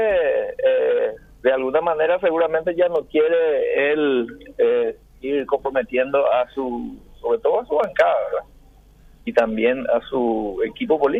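Every 2.44 s between 0.51 and 10.28 s there's a click, likely clock drift buffer slips: mismatched clocks dropping or repeating a few samples.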